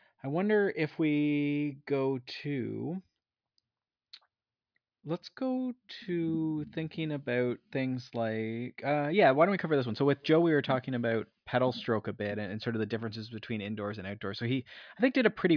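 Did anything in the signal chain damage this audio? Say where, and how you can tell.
No, nothing along the chain from capture to playback has left an audible mark on this speech.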